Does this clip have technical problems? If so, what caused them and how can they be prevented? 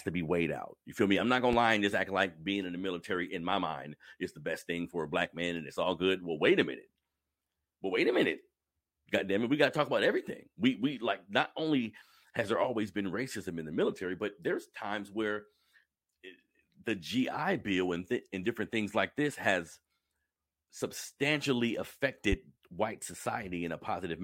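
Yes. Two loud pops land on the speech, at 1.53 to 1.57 s, between "feel me I'm not" and "lie and just act", and at 22.32 to 22.36 s, each a single sharp transient peaking around 10 dB above the signal, with speech continuing underneath. The likely cause is a voltage spike from a connector, switch, static discharge or driver glitch. Securing cables, grounding properly and avoiding switching during recording prevents this.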